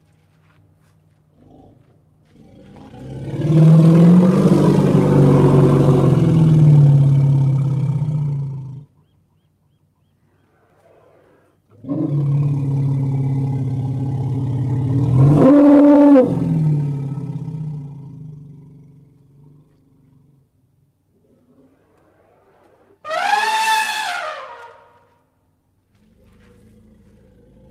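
Nothing stood out as a technical fault on listening to this clip.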